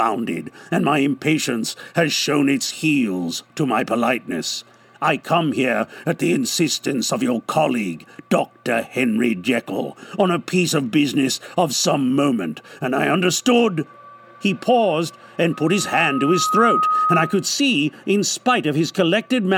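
From 15.53 to 17.51 s a loudspeaker feedback squeal rises at 1.3 kHz, swelling over roughly a second to sit a few dB above the audio as the mic-to-speaker loop runs away. A spectrogram shows one brightening horizontal line, and the waveform envelope balloons.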